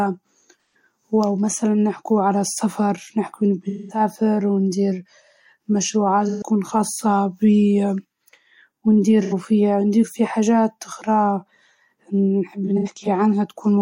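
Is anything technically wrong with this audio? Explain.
Yes. There is AAC frame loss with concealment at 0.68–0.75, 3.68–4.00, 6.28–6.42, 9.22–9.33 and 12.64–13.07 s, with the last one scattered and the longest gap about a tenth of a second. The decoder lost frames and rebuilt each gap from the last good spectrum, so the speech turns briefly smeared and noisy there.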